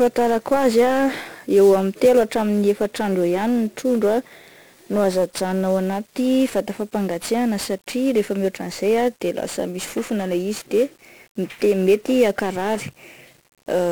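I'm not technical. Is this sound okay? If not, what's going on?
No. The speech is damaged by 1-bit DFPWM compression for the whole clip. This format keeps only a single up-or-down step for each tiny slice of sound, so heavy noise rides along with everything. The result is fuzzy, crackly speech, with the crisp upper detail buried in hiss.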